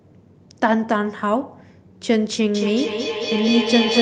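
Feedback echo between two devices from 2.55 s to the end of this speech clip: a second device replays it, repeating every fifth of a second, reaching about 0 dB.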